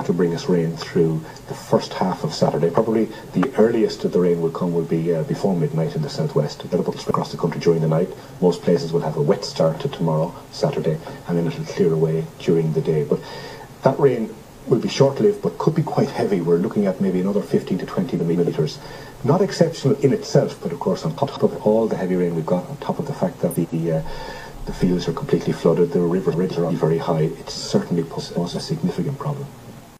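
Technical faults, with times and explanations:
6.72–7.11 s, 18.19–18.50 s, 21.18–21.38 s, 23.51–23.74 s, 26.32–26.72 s and 28.18–28.58 s: frames out of order. Adjacent blocks of 93 to 186 ms were decoded swapped, so each stretch plays halves reversed, a garbled flutter.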